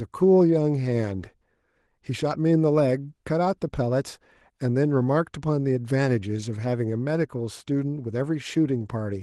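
No technical faults are audible.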